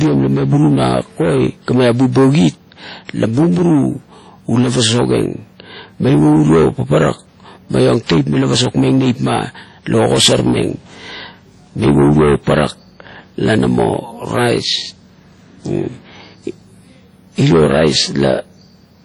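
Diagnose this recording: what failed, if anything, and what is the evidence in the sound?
Codec stage: the speech rings and smears throughout, with breathing hiss and nothing above 19.1 kHz. Likely heavy WMA compression, its long blocks spreading noise, at around 32 kbps.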